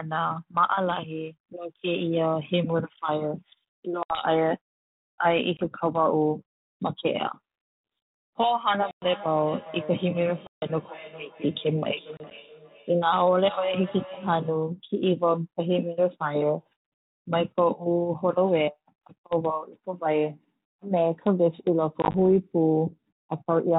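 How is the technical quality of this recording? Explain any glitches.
The speech carries repeated dropouts and, in the middle stretch, a circling echo. The band-limited telephone sound fits G.726 ADPCM at 32 kbit/s.

Packet loss on an ADPCM call: hard-edged holes at 4.03–4.22 s, 5.57–5.61 s, 8.91–9.27 s, 10.47–10.66 s, and scattered gaps at 12.17–12.36 s and 22.02–22.15 s, losing 20 to 150 ms each. Missing packets become silence, and the decoder's predictor and step size fall out of step with the sender's, so speech resumes slightly distorted before settling.

Feedback echo between two devices: from 8.77 to 14.74 s, speech comes back roughly every 0.4 s, thinner and ringing, at about 16 dB below the direct speech. Two devices share the call in one room, and each microphone recaptures the other's playback, which neither echo canceller removes.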